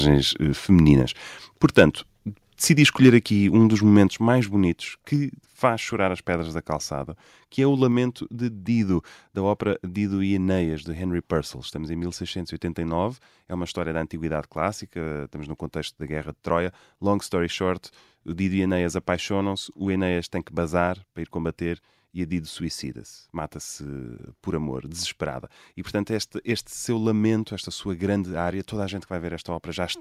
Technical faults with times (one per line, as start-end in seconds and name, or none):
1.64-1.83 microphone overload
2.81-3.16 microphone overload
3.09 microphone volume stepped down